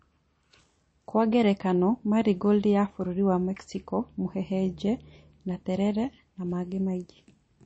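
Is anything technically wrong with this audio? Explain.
Yes. Throughout the speech there is likely MP3 compression: nothing above 8.3 kHz, and plainly audible watery, swirly artefacts from starved frequency lines, which fits a 32 kbps encode.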